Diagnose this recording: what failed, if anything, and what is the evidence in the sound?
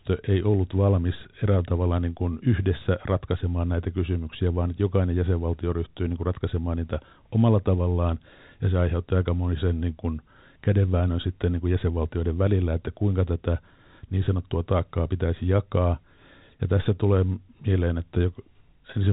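Nothing failed: the speech sits on an ordinary G.711 telephone coding path, its band stopping at 4 kHz with at most a faint quantisation noise riding along with the level, as companded 8-bit telephone coding leaves.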